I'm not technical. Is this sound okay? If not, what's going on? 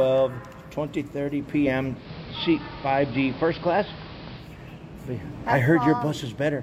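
No. Digital radio blending to analogue, 1.93 to 4.53 seconds: the radio lost its digital signal and switched to the station's AM broadcast, so the sound turns muffled, with hiss.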